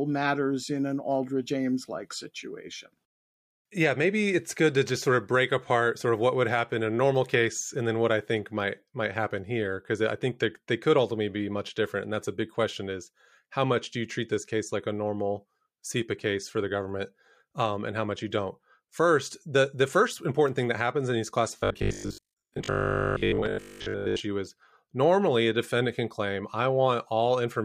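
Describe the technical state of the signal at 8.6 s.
At 8.6 s the signal is intact, with no audible fault at that moment.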